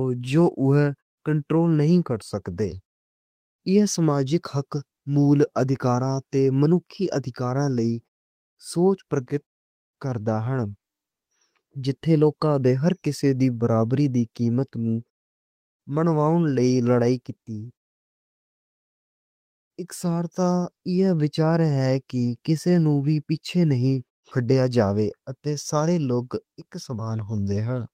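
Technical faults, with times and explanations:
No technical faults can be heard in the speech. In the pauses the output fades down to silence, taking the background with it, and comes back up in time for each next sound, so only very quiet sound is lost.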